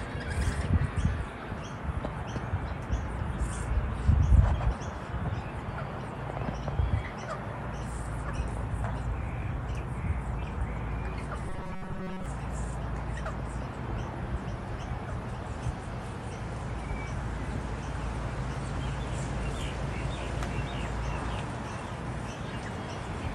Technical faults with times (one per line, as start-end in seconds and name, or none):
11.46-12.26 robotic sound from repeated short buffers